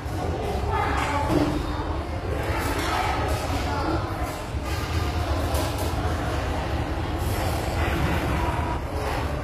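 From the first moment to the last, the treble has a bright but synthetic sheen: transients in the top octave sound gritty and metallic, and the spectrum ends abruptly at 14.9 kHz. That points to HE-AAC compression at a low rate, likely around 24 kbps. Only the lower band carries real detail; the upper band is regenerated from copies of it, so its harmonics fail to line up. Ordinary lowpass filtering would dull the top instead of roughening it.

From 4.93 s to 8.77 s a second full-band copy of the audio runs about a fifth of a second behind the original, roughly 5 dB quieter. It cuts in and out abruptly at those times and repeats each event cleanly, with no decay and no added room tone. This is a doubled audio track, likely a second, slower capture path mixed in alongside the first. A room echo would sound softer and darker, and a delay effect would repeat and fade out gradually.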